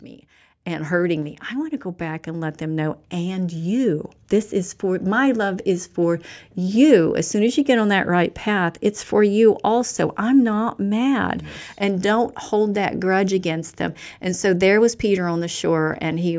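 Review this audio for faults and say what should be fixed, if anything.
Automatic gain rising runs from 0.65 to 5.95 s. The control heard a quiet input and slowly raised its gain by about 12 dB, so speech and background noise swell together. A talker moving closer would lift only the voice. To prevent this, set a proper input level so the gain control doesn't need to climb.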